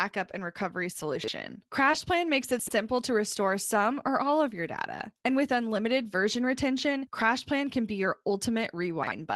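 Speech, carried over a call path whose Opus coding leaves a spectrogram ceiling near 12 kHz, with three chunks-out-of-order jumbles: 1.16–1.28 s just after "and recovery", 2.59–2.71 s just before "to restore some or", and 9.03–9.11 s. Each shows 40 ms blocks played late, with hard joins where the order breaks. At 1.91–1.95 s, short concealed packet loss fills 13 ms of a 20 ms hole with a brief smeared extension of the preceding sound. Inside that, from 1.93 s, the lost packet is rebuilt from error correction, showing a rougher, noisier 20 ms patch.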